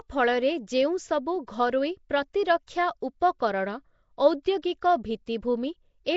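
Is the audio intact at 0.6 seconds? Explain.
No. Nellymoser compression runs through the whole clip. Starved bands are likely refilled with noise, giving a rough, hissy, underwater smear, with nothing above 7.7 kHz.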